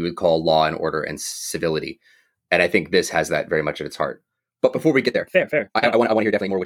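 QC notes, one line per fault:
5.04–6.65 s, time-stretched section: right after "before we", the speech suddenly runs at about 1.85 times its earlier pace through to the end of the clip, while the pitch stays where it was. The result is rushed. This is likely software squeezing the passage to fit a shorter slot, holding the pitch by cutting out short slices of the waveform.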